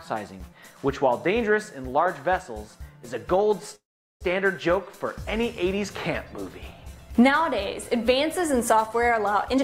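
At 3.75 s the sound stops dead and is replaced by a brief buzzing continuation of its last moment, which fades into silence for about 400 ms before the audio resumes at 4.23 s, after 453 ms of filled-in sound, exactly where it left off. This is a call audio freeze, most likely caused by packets stalling in transit until the jitter buffer ran dry. Unlike a packet-loss dropout, nothing is cut out: the gap is inserted, and everything after it arrives roughly half a second late.

From 9.45 s to 9.63 s, the very end, a jitter buffer speed-up catches up on accumulated delay. The receiver trims tiny pitch-period-sized slices over and over, so this stretch plays at about 174% speed, shedding roughly 150 ms in under 0.2 s. It sounds rushed, but the pitch stays put, which separates it from a simple faster playback rate that would raise the pitch along with the tempo.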